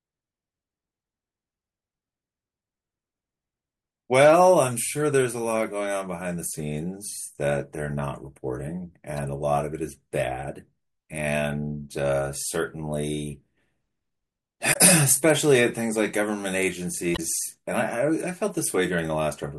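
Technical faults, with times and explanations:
9.17 s, 14.70–14.77 s and 17.13–17.20 s, damaged data in a compressed stream: brief chirps or blips cut into the speech, the first very short, the other two about 70 ms each. Corrupted bytes in the coded stream make the decoder misread those frames and lose sync until it finds the next valid frame header.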